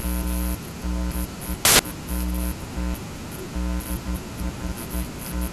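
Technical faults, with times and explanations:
1.65 to 1.79 s, samples built from the wrong bytes: for about 0.14 s the speech is replaced by a burst of loud, harsh broadband noise. The bytes of each sample are being combined incorrectly, through a one-byte offset, swapped byte order or a wrong alignment assumption. That makes the rapidly fluctuating low-order bits act as the most significant part of every value. The result is wideband noise at high level.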